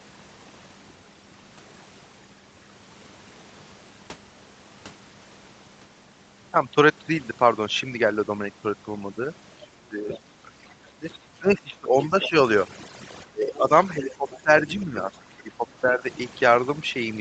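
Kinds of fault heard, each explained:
Overdone noise removal: heavy noise reduction runs throughout, leaving a lowered background that breaks up into twinkling specks.
Other side's voice leaking through: brief scraps of a second voice, roughly 15 to 30 dB below the speech, likely residual echo the canceller missed.
Speech suppressed in double talk: the speech dips by up to about 25 dB in stretches between 9.6 and 16.0 s, likely the echo canceller ducking during overlap.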